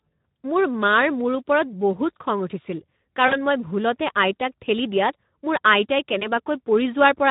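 Throughout, Speex codec damage makes the speech hoarse and noisy, which fits a bitrate around 11 kbps. On a spectrogram, the harmonics look smeared and grainy.

From 3.27 to 3.36 s, between "খং উঠিছিল" and "মই ভুলতে", VoIP packet loss concealed by the speech codec stretches the last sound into a fading buzz or coloured noise, covering about 40 ms of lost audio. The same thing happens more briefly from 6.19 to 6.29 s, covering about 20 ms. On the waveform, each one shows as a repetitive, decaying stretch.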